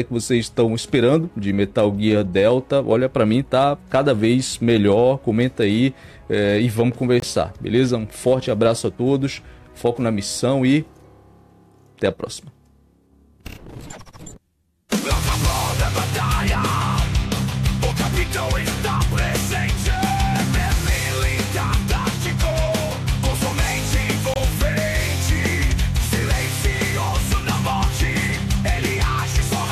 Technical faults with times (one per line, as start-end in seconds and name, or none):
7.20-7.24 corrupt frame muted
24.34-24.37 corrupt frame muted